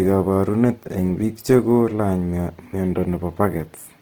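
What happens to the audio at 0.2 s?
At 0.2 s, as throughout, the speech is rough and grainy. The likely cause is Opus compression near 16 kbps, which fills bit-starved bands with noise.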